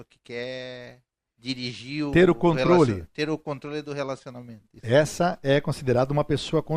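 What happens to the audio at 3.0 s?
Two devices in the chain are likely running on independent clocks with nothing locking them together, drifting apart by roughly 70 parts per million, so a single sample gets dropped or repeated each time the gap reaches a full sample. At 3.0 s the speech sits inside a run of these clock slip clicks lasting from 0.15 s to 6.63 s: faint, regular ticks about every 0.3 s, around twenty in all, most noticeable on louder stretches.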